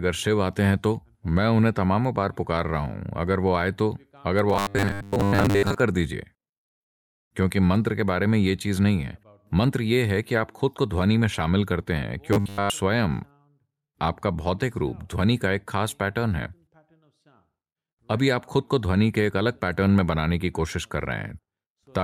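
From 4.50 to 5.80 s, and again from 12.33 to 12.70 s, the speech turns into a rigid metallic buzz at 100 Hz: robotic sound from repeated short buffers. The likely cause is about 10 ms of audio being looped while new data lagged. This affects most of the first stretch and all of the second.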